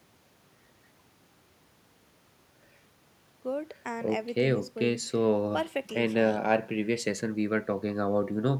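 A short speech recording with no technical faults in it. Nothing at any point in the audio calls for a time or a cause.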